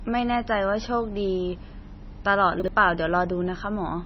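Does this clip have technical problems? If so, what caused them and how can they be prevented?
Yes. Throughout the speech the sound is watery and swirly, with metallic chirping on sibilants and softened consonant attacks. Nothing is audible above about 5.9 kHz, so the treble is dull and boxed in. This is heavy damage, most likely from MP3 compression at a very low bitrate, around 24 kbps. At that bitrate the encoder removes the top band and drops weak frequency lines that flicker between frames. Encoding at a higher bitrate, or with a lossless format, prevents this.

From 2.6 to 2.68 s there is a brief jumbled stutter. This is chunks out of order. A 40 ms block of audio arrived or was written one chunk late and plays after the block that should follow it. The two chunks swap places. No sound is missing, but the order is wrong and the joins between them are abrupt. Sequence-numbering chunks and reordering them in a jitter buffer before playback or writing prevents this.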